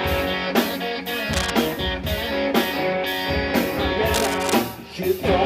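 A worn cable, connector or control was likely being moved, so its contact resistance jumped around rapidly and let dense, irregular bursts of noise into the signal. This cable scratch noise appears twice, from 1.33 to 1.51 s and again from 4.14 to 4.55 s, the second burst lasting noticeably longer. Each time a harsh scratching, rustling layer sits over the sound, only about 5 dB below it, so it is clearly audible.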